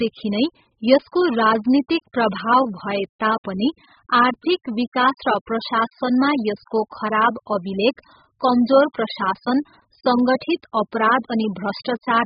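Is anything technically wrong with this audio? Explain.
Yes. Throughout, the speech sounds dull and smeared, with nothing above 5.1 kHz and a warbling fizz on sibilants. The likely cause is heavy AAC compression at a very low bitrate, around 8 kbps: the encoder discards the top band and coarsely quantises what remains, leaving gaps and substitute noise.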